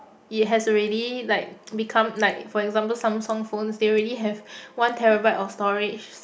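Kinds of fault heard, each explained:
No fault is audible anywhere in this speech recording.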